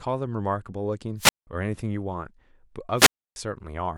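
Speech with a wireless microphone squelch dropout twice: the radio link fades, the receiver mutes, and a hiss burst precedes silence of 0.18 s (1.17–1.47 s) and 0.30 s (2.96–3.36 s).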